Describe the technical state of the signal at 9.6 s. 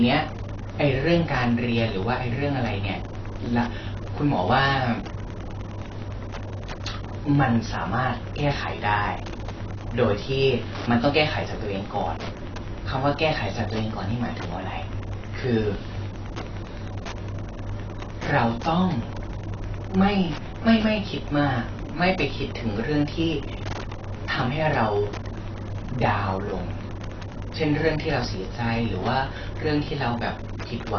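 At 9.6 s, as across the whole clip, Wi-Fi interference adds a steady tick every 102.4 ms, about 20 dB below the speech, seen as evenly spaced thin vertical lines on the spectrogram. The speech is also dull and smeared, with warbling sibilants and nothing above 6.6 kHz, a flat ceiling on the spectrogram, most likely from AAC compression at a low bitrate, which fits roughly 24 kbps.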